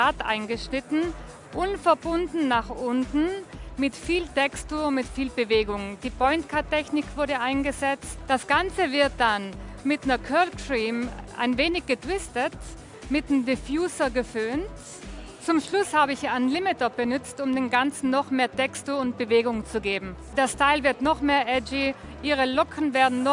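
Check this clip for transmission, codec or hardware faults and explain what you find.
No transmission, codec or hardware problems can be heard here.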